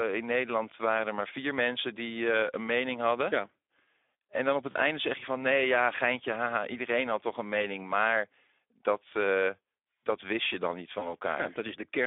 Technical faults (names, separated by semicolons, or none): Speex codec; VoIP packet loss concealed by the speech codec